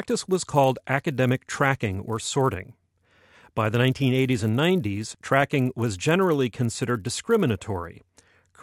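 Resampler restarted on every block, throughout the speech: each 10 ms chunk was converted separately, consistent with upsampling from 24 kHz to 48 kHz, so the filter lacked neighbouring samples at every edge. The resulting errors repeat at 100 Hz, heard as a buzz riding on the speech.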